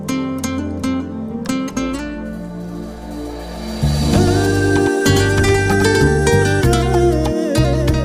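From 4.27 to 6.07 s a crisp, undecayed echo trails everything by about a tenth of a second, somewhat quieter: a doubled audio track, likely a second, slower capture path mixed in.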